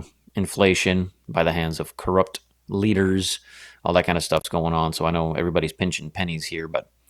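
It's a speech clip with one intermittent contact fault: around 4.37 to 4.45 s a loose connection drops out for roughly 49 ms, crackling at each edge with faint hiss underneath.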